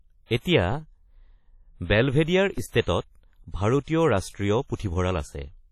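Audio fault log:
throughout: WMA compression. The speech sounds ringing and washy, with a hiss that rises and falls with the signal and nothing above 14.4 kHz. This points to a low bitrate, around 32 kbps, where a transform codec with long blocks smears quantisation noise over tens of milliseconds and zeroes weak components. The damage is heavy and likely comes from WMA encoding.
0.72 s and 2.58 s: DC step. At each point the waveform's zero line jumps suddenly, which is heard as a low thump or click while the speech carries on unchanged. After each jump the offset dies away, following a decay that fits a high-pass filter near 5 Hz.
2.81–2.87 s, 3.82–3.88 s, 4.75–4.79 s: pre-echo. A short hiss comes before each of these three sharp attacks, lasting 59 ms, 51 ms and 41 ms. Because the codec spreads noise evenly across a whole block, noise sized for the loud onset also fills the quiet moment before it, and the attack sounds smeared.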